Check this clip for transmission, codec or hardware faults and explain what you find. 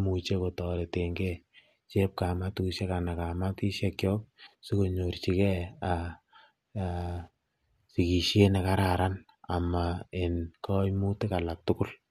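Nothing wrong can be heard anywhere in the recording.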